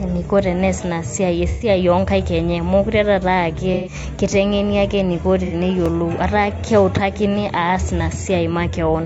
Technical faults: low-delay AAC compression; AAC frame loss with concealment; repeated buffer

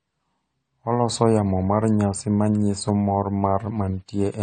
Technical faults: AAC compression

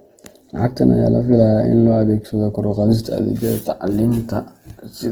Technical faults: Opus compression

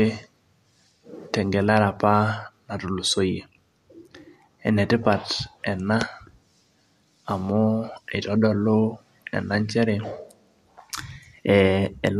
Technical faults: none

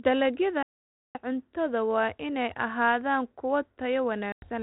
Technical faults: playback stall; packet loss on an ADPCM call

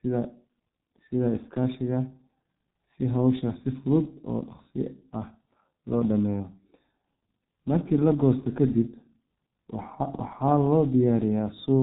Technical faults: G.723.1 codec

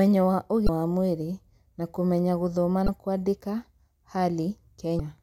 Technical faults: damaged data in a compressed stream

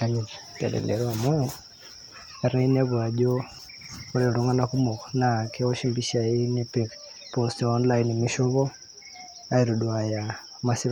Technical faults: audio missing between chunks

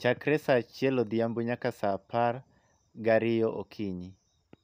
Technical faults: none

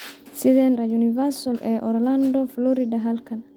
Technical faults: skip ahead; jitter buffer speed-up

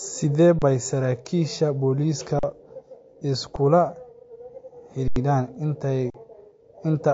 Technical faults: low-bitrate audio saved at a high bitrate; underrun with held sample

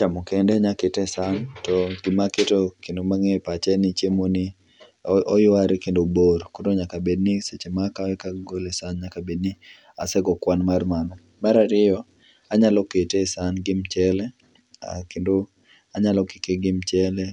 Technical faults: imaging from linear upsampling

